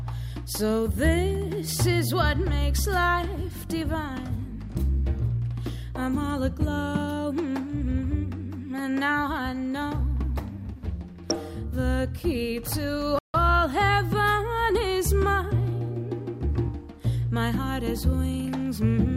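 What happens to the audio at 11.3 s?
DAB burbling hits from 11.30 to 11.40 s. A small fraction of bits escape error correction, so wrong samples put short blips of noise in single sub-bands. It sounds like brief burbling blips.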